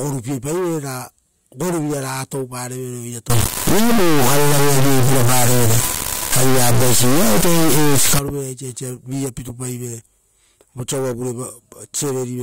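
An integer read as float fault hits this speech clip from 3.30 to 8.19 s. The 32-bit integer samples are interpreted as 32-bit float, so the output becomes a harsh, buzzing square wave slamming between silence and the clipping limit.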